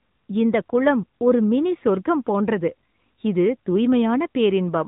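AMR narrowband mobile codec damage runs through the whole recording, from start to finish. The speech has been squeezed through an 8 kHz phone-style coder that rebuilds the voice from a vocal-tract model excited by a few pulses per short subframe, so nothing survives above 3.8 kHz. The result is plainly audible: a boxy, band-limited voice with a buzzy, synthetic edge, which fits a mid-rate mode around 10 kbps.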